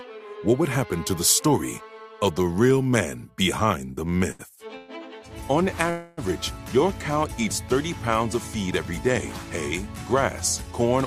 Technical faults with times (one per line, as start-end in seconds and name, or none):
4.17-4.90 repeated stalls (stutter)
5.90-6.19 call audio freeze